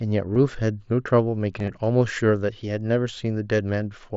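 A speech recording over a Bluetooth headset link, where the wideband band-limit and slight graininess on louder sounds point to the mSBC codec, shows concealed Bluetooth headset packet loss. Voice packets failed to reach the phone, so the receiver filled each gap by repeating the best-matching recent stretch of waveform. A brief loss at 0.35 s covers two frames, about 15 ms. From 1.59 to 1.70 s, about 60 ms of gaps spread over roughly 105 ms, the longest about 22 ms, give a short buzzy, held tone and a small warble as real audio resumes.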